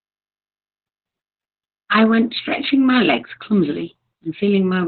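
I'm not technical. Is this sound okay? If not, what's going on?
No. Heavy Opus voice compression runs throughout: the speech is squeezed into a narrow band with nothing above about 4.4 kHz, so it sounds muffled, hoarse and slightly robotic.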